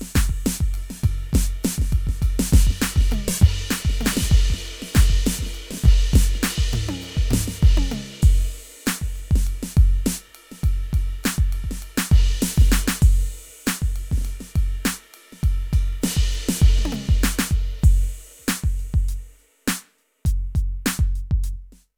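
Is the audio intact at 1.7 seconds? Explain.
No. The same music is likely being captured a second time along a slower path, creating a doubled audio track from the start until 6.38 s. A dry, full-band copy about as loud as the original trails it by roughly a second, so passages overlap themselves.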